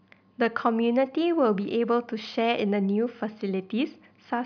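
No technical faults are audible.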